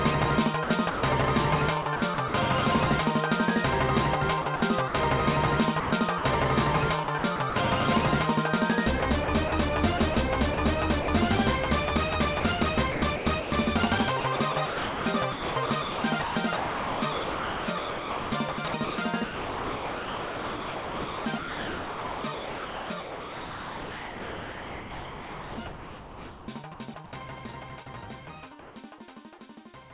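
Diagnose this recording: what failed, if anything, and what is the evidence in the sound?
Call processing: the sound is chopped by the voice detector, likely from discontinuous transmission, at 0.64–2.34 s, 4.42–4.94 s, 5.8–7.56 s, 9.0–11.08 s and 12.4–26.48 s. Quiet edges drop into flat synthetic noise, about 0.16–0.38 s per stretch, and roughly 10 s across the long final one.

Call processing again: comfort noise replaces the background at 28.6 s, for 0.16 s. The sender likely stopped transmitting, and the receiver filled the gap with steady, featureless noise about 1 dB off the real background, which sits about 25 dB below the loud passages. The band ends at 4 kHz, as expected on a narrowband call path.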